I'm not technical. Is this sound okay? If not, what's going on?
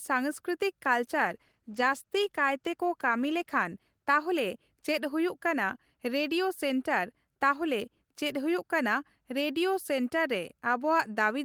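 No. From 1.12 to 4.45 s there's a call bitrate drop. The connection sent less detail, so the speech turns rough and muffled, then clears.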